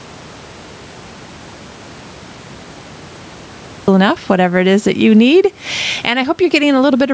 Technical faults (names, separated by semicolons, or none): gain pumping; audio dropout to silence